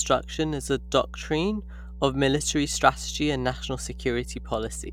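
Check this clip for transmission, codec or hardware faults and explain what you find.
A steady low drone runs under the speech for the whole clip: mains hum at 60 Hz, fairly prominent at roughly 15 dB below the speech. A ground loop or nearby transformer is coupling the power-line frequency into the signal path, adding a constant tone beneath everything.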